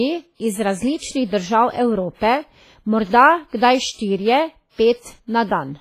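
The clip is speech carrying WMA compression artefacts throughout. The sound rings and smears, with a washy hiss that breathes with the signal. Nothing is heard above 15.5 kHz. This is likely heavy WMA coding, which fits a low bitrate near 24 kbps.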